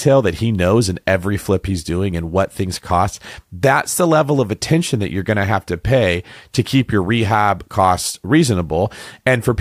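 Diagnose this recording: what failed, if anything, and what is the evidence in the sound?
Nothing failed: no stage from capture to playback leaves any audible mark on this speech recording.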